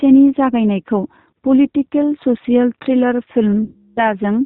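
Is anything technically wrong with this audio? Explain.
Yes. Throughout, the G.729 codec's 8 kbit/s coding makes the speech rough and slightly synthetic; a spectrogram shows nothing above 4 kHz and smeared harmonics.

From 3.64 to 4.11 s, VoIP packet loss concealed by the speech codec replays the last pitch and filter over about 330 ms of missing audio. The gap becomes a fading buzzy tone or coloured noise, seen as flat repeated harmonics or flat noise and a decaying waveform envelope.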